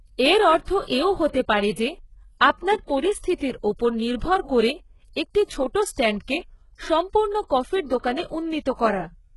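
Throughout the speech, sibilants sound gritty and metallic, with nothing above 11.4 kHz. Unlike plain band-limiting, the treble stays bright but synthetic, likely heavy HE-AAC compression, fitting roughly 12 kbps.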